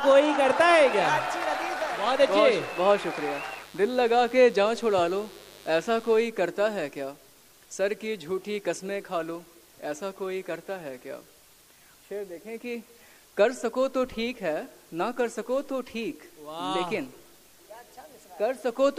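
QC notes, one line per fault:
0.55–6.25 s, mains buzz: a steady, raspy buzz sits roughly 25 dB below the sound, then stops cleanly at 6.25 s. It is locked to a 50 Hz supply. Sharp switching spikes, such as those from a dimmer or rectifier, get in twice per cycle, so the energy spreads into many harmonics up to several kHz. That spiky, bright edge separates it from plain mains hum, which is a smooth, low 50 Hz tone with few upper harmonics.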